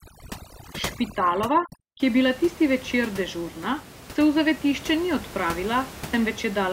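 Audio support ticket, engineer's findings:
Overdone noise removal, 0.00 to 2.00 s: twinkling specks over near-silent background. Noise suppressor set too strong, zeroing bands near its noise estimate. Unlike a gate, the room noise about 15 dB down stays steady afterwards.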